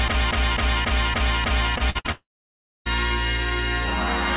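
Repeated packet loss (robotic sound) runs from 1.78 to 2.10 s. Four short gaps open in the stream, the longest about 57 ms, and each is bridged by stretching the last received sound before the next gap arrives. Nearly half of that span, about 43 percent, is synthetic fill, so the sound turns choppy and robotic, with slivers missing between the repeated fragments. The narrowband call path carries nothing above 4 kHz.

A long network dropout, the likely cause, follows from 2.12 to 2.87 s. The audio breaks into a brief smeared buzz that decays quickly. Then there is roughly 0.6 s of silence before the sound resumes. Around 0.74 s of material is simply gone. When playback returns, it picks up later in the stream rather than where it left off, so the part inside the gap is never heard.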